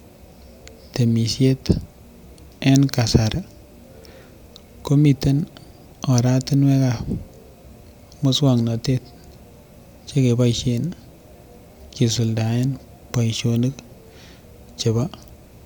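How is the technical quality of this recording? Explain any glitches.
No technical faults are audible.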